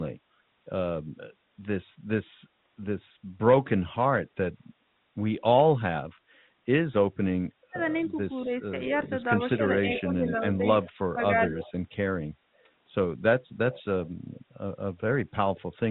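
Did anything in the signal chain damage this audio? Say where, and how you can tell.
Yes, the call-processing stage caused it. Between 7.7 and 8.75 s the speech dips by about 5 dB, for roughly 0.4 s in total. From 9.35 to 11.66 s it drops by up to about 10 dB, for around a second altogether. This is likely speech suppressed in double talk: the echo canceller couldn't separate the near talker from loudspeaker echo and attenuated both.

Echo leak, also from call processing, shows up as a delayed copy of the speech trailing by 194 ms. From 9.07 to 10.26 s it sits about 10 dB below the direct speech, and from 10.85 to 11.71 s it is fainter, about 25 dB down. Likely cause: incomplete echo cancellation at the far end returned loudspeaker pickup.

The background gated by the echo canceller appears between 12.48 and 12.57 s. The room sound dips by about 6 dB for around 50 ms, then returns. The canceller clamped the microphone while the loudspeaker played, briefly pulling down the background, even though the band-limited narrowband audio (nothing above 4 kHz, consistent with G.711 A-law) is undisturbed.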